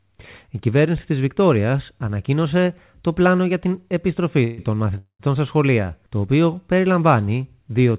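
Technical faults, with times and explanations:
4.44–4.60 s and 4.98–5.21 s, call audio freeze: the last sound is drawn out as a fading buzz or hiss for 138 ms, then 216 ms, ending in 90 ms of silence, likely from an emptied jitter buffer. Unlike a dropout, nothing is lost. Playback resumes where it stopped, so later audio runs 354 ms late.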